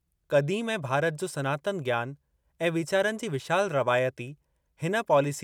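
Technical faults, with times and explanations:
No technical faults can be heard in this speech recording. Nothing in it calls for a time or an explanation.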